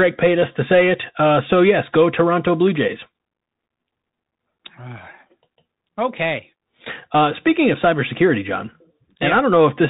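Speech routed through a Bluetooth headset link encoded with the CVSD headset codec, for the whole clip. The band is capped near 4 kHz, and coding each sample as a single up-or-down step makes sibilants turn scratchy, loud bright sounds overload, and granular hiss sit beneath, consistent with a 64 kbps stream.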